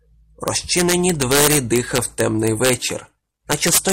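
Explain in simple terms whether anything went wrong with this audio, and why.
Yes, something went wrong: integer overflow runs through the whole speech clip. When the loudest moments pushed past the largest number the system could store, they wrapped around to the opposite extreme, so the few brief moments that went over snap into violent cracks, far harsher than the flattened buzz of clipping.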